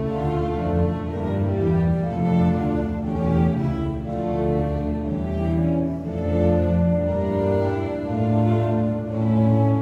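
Listening to this music, nothing stood out as a technical problem.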